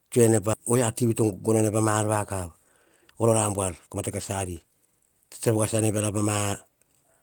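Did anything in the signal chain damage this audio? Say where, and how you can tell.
Yes, both problems sit in the network and jitter-buffer stage of the receive path. At about 0.53 s the speech makes a skip ahead. Roughly a second of audio is simply gone, and the two sides are butted together within about 20 ms with nothing filled in. That abrupt join, with no silence and no smoothing, is what the buffer does when it discards a stretch of backlog that later packets had already overtaken. The playout delay drops by about a second in one step.

Right after that, a jitter buffer speed-up follows from 0.75 s to 3.98 s, ending just before "mate kas". It resumes after those words from 4.48 s to 6.23 s. In both stretches the speech runs at about 109% of normal rate while the pitch holds. The receiver is cutting out short pitch-period segments one after another to drain surplus delay, roughly 0.3 s in the first run and 0.15 s in the second. 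The result sounds hurried but not higher-pitched.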